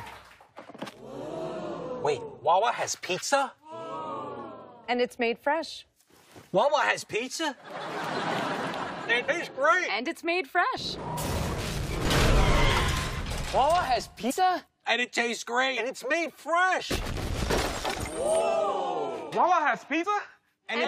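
At 9.28, 14.29 to 14.31 and 20.03 to 20.05 s, compressed frames are skipped. The audio jumps ahead about 70, 100 and 70 ms, consistent with a few 23.2 ms frames.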